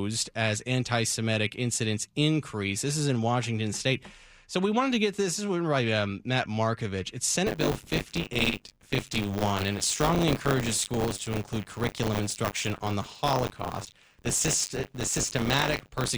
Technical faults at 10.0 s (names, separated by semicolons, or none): buffer tearing